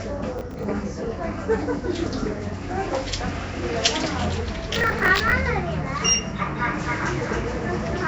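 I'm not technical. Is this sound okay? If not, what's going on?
No, there are three problems.

The whole recording has a rough, hissy haze and a smeared, underwater feel, and nothing above about 7.7 kHz, so it sounds dull. This is likely Nellymoser compression, the old Flash microphone codec, which gives quiet parts of the sound no detail and fills them with noise. Unlike the crackle below, this damage never stops. It is present from start to finish.

From 0.38 to 0.64 s, and again, longer, from 4.74 to 5.32 s, a gritty crackle tears across the sound. That is processor overload crackle. The computer fell behind on its tiny chunks of audio, which sound to be around 10 ms each, and replayed stale bits in their place. It comes in bursts that start and stop, which sets it apart from the steady haze of the compression.

From 6.58 s to the end, a second, quieter copy of the sound runs about a third of a second behind the first. 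This is a doubled audio track, likely from the same sound being recorded twice through a slower route. It is not a room echo. The copy starts abruptly, repeats only once, never fades, and has no hollow room tone.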